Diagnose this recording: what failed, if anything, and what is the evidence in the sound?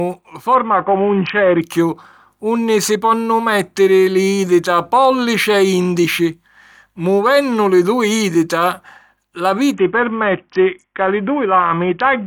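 From 0.55 to 1.61 s, and again from 9.74 s to the end, the speech turns dull and gritty. This is a Bluetooth SBC bit pool drop at the codec stage. Congestion forced the link down to what sounds like about 50 kbps, starving the upper sub-bands and coarsely quantising the rest.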